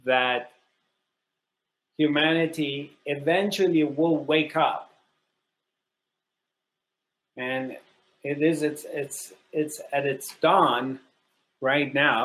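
No technical faults detected.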